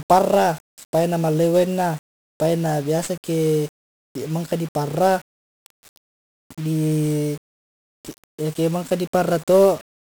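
From start to finish, the speech carries the sound of 1-bit DFPWM compression. Each sample is a single bit. That bit only pushes a running level up or down. The waveform is rebuilt from those small steps. The error is heavy and spread across the whole band. The speech sounds fuzzy and crackly. A dense hiss covers the treble and buries it. The data rate fits about 48 kbps.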